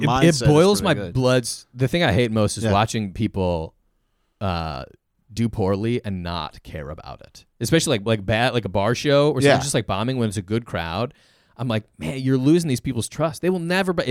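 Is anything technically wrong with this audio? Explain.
No, nothing technically wrong can be heard here.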